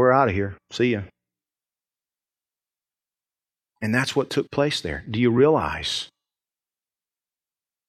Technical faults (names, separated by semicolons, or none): none